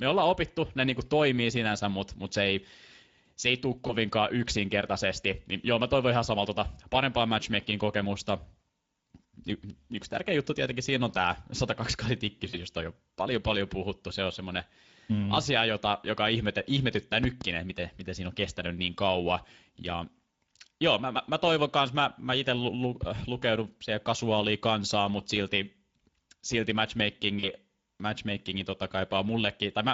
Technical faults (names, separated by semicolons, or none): Speex codec; VoIP packet loss concealed by the speech codec; loud pop